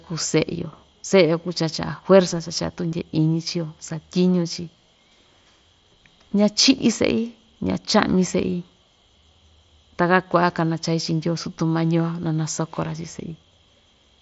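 At about 2.91 s there's a brief concealed Bluetooth headset packet loss, roughly 15 ms of audio, which fits a couple of dropped packets between headset and phone. The receiver patched the gap by repeating the closest-matching bit of the waveform it had just played, so instead of a click you get a tiny buzzy smear. The link is running the wideband mSBC headset codec, so speech stays capped at 8 kHz.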